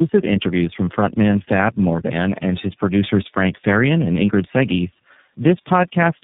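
From start to finish, the speech shows tandem speech coding. It sounds rough, muffled and warbly, which points to three low-rate speech codecs in a row, with the last resembling iLBC. Each codec re-encoded audio already degraded by the one before, so the errors piled up. Nothing is heard above 3.8 kHz. The top end is missing, and consonants lose their edge. The warble comes from repeated approximation of the voice at each step.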